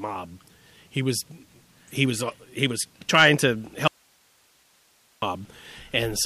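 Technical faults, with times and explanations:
3.88–5.22 s, audio dropout to a faint residue: right after "he was trying to", the speech cuts out abruptly for about 1.35 s and the gap is left holding only hiss, roughly 40 dB below the speech level. The likely cause is the wanted signal being lost upstream while the path after the break stayed live, so its own noise floor carries on through the gap. That is why the sound stops dead mid-phrase instead of pausing or fading.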